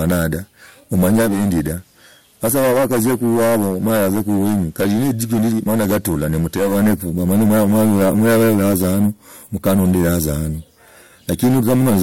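From start to finish the speech has a harsh, fuzzy edge on every loud syllable. This is hard clipping: the signal is overdriven by about 14 dB, so a large share of the peaks are sliced flat. From 1.16 s to 6.85 s, faint hiss rises and the level drops about 3 dB. This is digital radio blending to analogue, with a 306 ms cross-fade to the FM broadcast and back.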